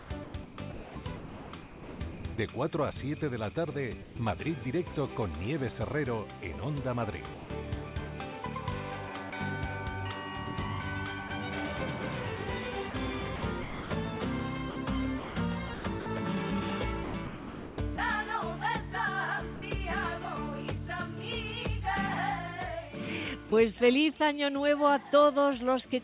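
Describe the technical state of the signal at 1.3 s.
At 1.3 s the signal sits inside a stretch of sound chopped by the voice detector, running from 0.00 to 2.38 s. The audio cuts in and out here. About 1.46 s of the stretch is missing, filled with comfort noise. The likely cause is the sender's voice detector gating transmission on and off, with comfort noise standing in during the gaps. The band stops at 4 kHz, which fits a 64 kbps G.711 call path.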